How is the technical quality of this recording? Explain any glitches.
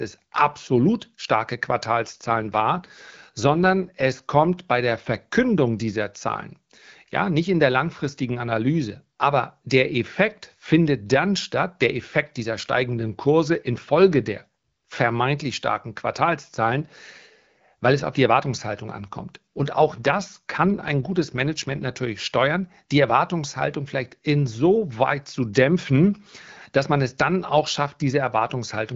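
Two stretches of degraded speech stand out in this AMR wideband (HD Voice) call, whose codec leaves only light coding roughness elsewhere.

AMR rate drop, 2.04 to 4.08 s (after "absolut starke", ending before "kommt bei der") and 18.89 to 21.92 s (ending before "steuern die"): a weakening radio link forced the codec to a lower rate so more bits went to error protection, which fits a step from 12.65 to 8.85 kbit/s. The bandwidth holds and nothing drops out, but the speech turns rougher and more synthetic until the rate recovers.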